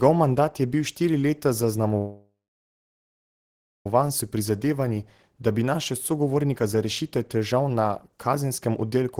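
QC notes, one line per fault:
1.97–3.86 s, call audio freeze: right after "je bil štiri leta" the sound hangs as a short fading continuation, then about 1.5 s of silence. The likely cause is delayed packets draining the jitter buffer. Speech resumes where it stopped, with nothing lost, but is now 1.88 s late.
4.01–4.37 s and 5.63 s to the end (after "da bi"), jitter buffer speed-up: speech runs at 108% speed with unchanged pitch and sounds hurried. The receiver trims repeated pitch-period slices to shed the backlog, roughly 40 ms in the first stretch and about 300 ms in the second.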